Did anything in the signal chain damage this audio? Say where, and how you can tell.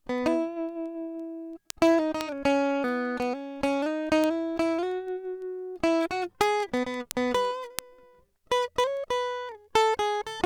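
Yes, word clock ticks from 0.18 to 10.32 s: about seventy sharp, single-sample clicks every 0.15 s or so. That fits an unlocked digital-link clock drifting roughly 150 ppm.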